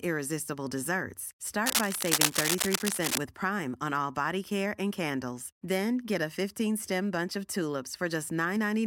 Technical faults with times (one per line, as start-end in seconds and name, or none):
1.66-3.20 cable scratch noise